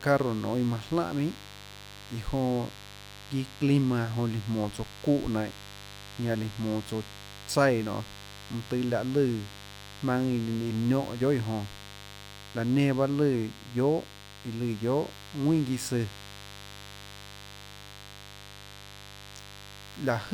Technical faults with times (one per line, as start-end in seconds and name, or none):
0.00-20.33 mains buzz